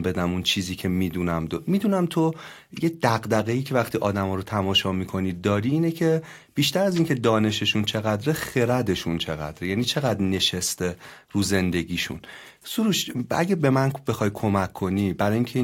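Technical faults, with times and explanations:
No technical faults are evident in this speech recording.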